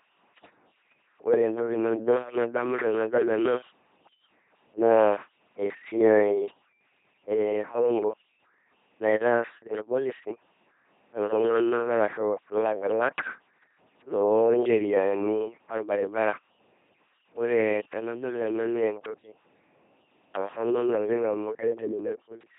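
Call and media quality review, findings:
LPC-10 vocoder artefacts, full clip: heavy buzzy, mechanical robot quality on speech, nothing above 3.8 kHz. Source is an LPC-10 codec at 2.4 kbit/s, with an all-pole vocal tract filter driven only by pulse train or noise, and each frame wholly voiced or unvoiced.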